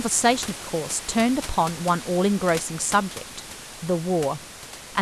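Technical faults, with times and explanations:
No technical faults found; the room noise sits about 14 dB below the speech and belongs to the recording itself.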